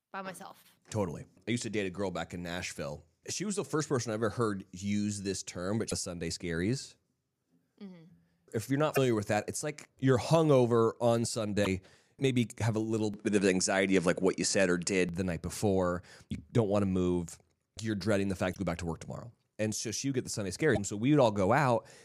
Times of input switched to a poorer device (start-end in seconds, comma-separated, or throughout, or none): 13.14-15.09